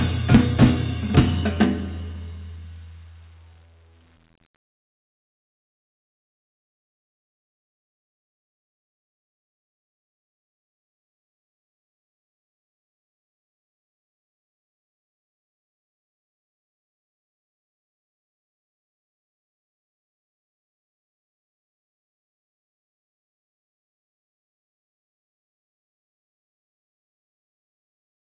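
No faults found; the audio passes through a narrowband call path with nothing above 4 kHz, which fits G.711 mu-law at 64 kbps, and that band limit is expected for such a link.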